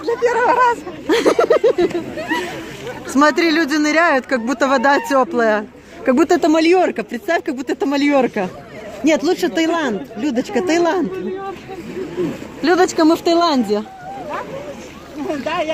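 Nothing here catches the ear as a technical problem; the audio runs along steadily with no glitches or dropouts to point to.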